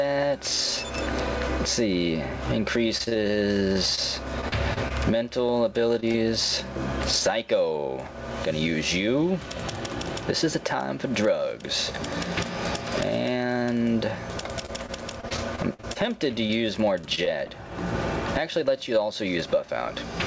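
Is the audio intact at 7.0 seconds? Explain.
No. At 7.0 s, as throughout, there is gain pumping: the level surges and ducks by around 25 dB, likely from excessive gain and a fast limiter clamping each loud sound. Unlike a noise gate, the gain is pulled down on loud sounds rather than quiet parts cutting out.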